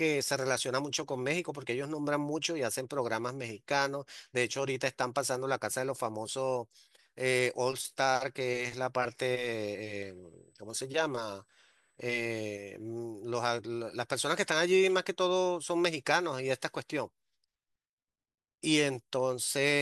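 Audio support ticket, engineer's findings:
USB whine, 9.75 s to 12.71 s: steady fixed-pitch tone at 8 kHz under the speech, roughly 45 dB below signal. Probable component: USB interface power or ground. Mechanism: 125-microsecond microframe current draw coupling into the analogue path.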